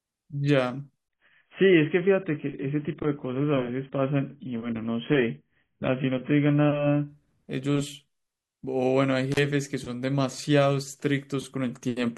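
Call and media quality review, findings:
1.08 to 7.08 s: treble gone, nothing above 3.4 kHz, sudden switch with no gap, then back. Adaptive stream at a lower bitrate kicked in, likely a slow connection. Sound points to a drop from around 96 down to about 16 kbit/s AAC.

9.32 to 9.39 s: brief cutout, open for about 32 ms, crackle at both edges and faint hiss in the hole. Intermittent contact, a loose cable or plug momentarily breaking the line. Worth reseating connectors on that path.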